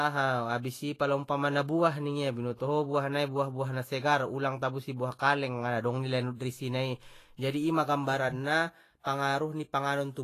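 From start to finish the speech is hissy and grainy, with a roughened edge on sustained tones and softened consonant attacks, and nothing is present above 14.2 kHz. This is likely Vorbis compression at a low setting, consistent with roughly 32 kbps: treble detail is quantised so coarsely that it turns into noise of similar energy. A spectrogram shows a hard ceiling at 14.2 kHz and speckled, patchy texture beneath it instead of clean harmonics.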